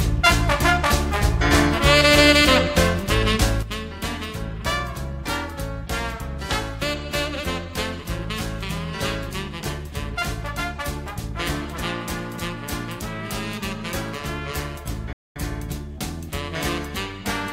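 A gain setting was most likely applied without a ramp at 3.63 s, producing a sudden gain jump: the level drops by about 10 dB from one sample to the next, with the background noise falling together with the sound, and it stays at that lower level to the end. Later, the player likely ran out of data or had its thread blocked, causing a playback stall from 15.13 to 15.36 s, where the output goes silent for 230 ms in mid-flow before the audio resumes.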